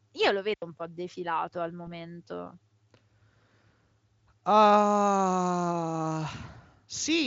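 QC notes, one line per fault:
0.54 to 0.62 s, digital wireless dropout: the radio link lost too much data and the receiver muted its output for about 83 ms with a very short fade, leaving a clean hole of near silence in the speech with no burst of noise on either side.
1.85 to 1.91 s, VoIP packet loss concealed by the speech codec: one 20 ms packet went missing and the decoder filled the gap by extrapolating its last pitch and filter at falling gain, so the speech smears into a brief weakened stretch before recovering.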